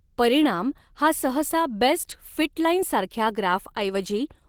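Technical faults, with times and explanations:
Throughout, Opus voice compression: the speech sounds plainly hoarse and slightly robotic. A SILK linear-prediction layer below 8 kHz codes the excitation coarsely, while a CELT layer carries the band up to 20.2 kHz. This fits a bitrate near 16 kbps.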